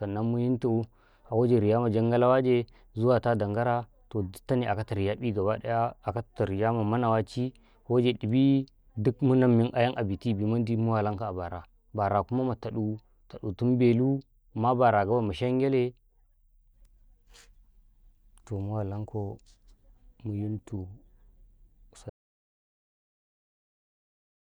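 It's a speech recording, and the trouble comes right at the tail: at about 22.10 s the audio drops out to silence and stays gone through the end at 24.55 s. That's a dead-flat audio dropout to silence, with no room tone or noise floor left. The likely cause is the input getting lost, whether from a disconnected device, a failed link or a mute, while the recorder kept writing, so the last two and a half seconds of speech are simply gone.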